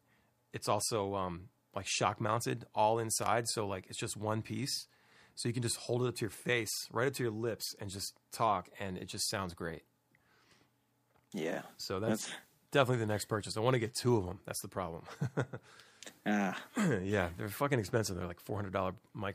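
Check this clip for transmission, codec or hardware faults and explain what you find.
One hardware fault stands out: a short burst of loose connector crackle from 3.22 to 3.26 s in the speech. A worn or dirty contact was making and breaking as it shifted, chopping the signal on and off and adding pops wherever DC sat on the line. It comes across as a ragged scratch rather than a single clean click. That irregular cluster of pops sets it apart from a digital dropout, which leaves a tidy gap with clean edges.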